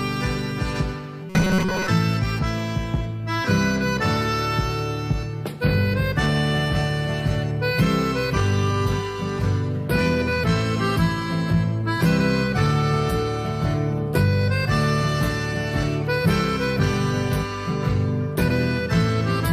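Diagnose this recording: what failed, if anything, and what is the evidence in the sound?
Robotic sound from repeated short buffers, 1.30 to 1.89 s. A rigid 188 Hz buzz follows the audio only roughly, with about 70% of it repeated. The likely cause is a starved buffer stage replaying roughly 5.3 ms chunks.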